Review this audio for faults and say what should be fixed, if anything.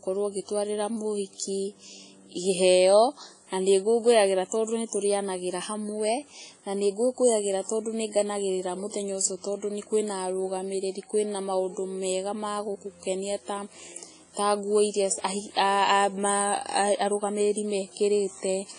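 WMA compression, throughout the speech from start to end: the sound is heavily smeared, with a ringing, washy quality and a hiss that swells and fades with each phrase. Nothing is present above about 10.1 kHz. This points to a long-block transform codec, likely WMA, at a low bitrate around 24 kbps, where quantisation noise spreads across tens of milliseconds around each sound and weaker spectral detail is discarded outright. To prevent it, record or export at a substantially higher bitrate or in a lossless format.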